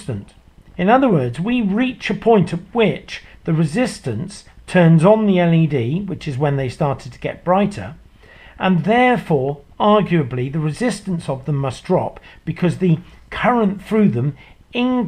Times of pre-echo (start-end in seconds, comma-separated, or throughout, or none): none